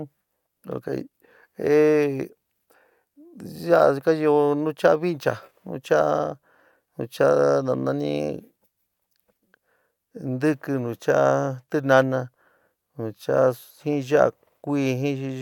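No technical faults can be heard anywhere in the recording, so there is nothing to place in time order.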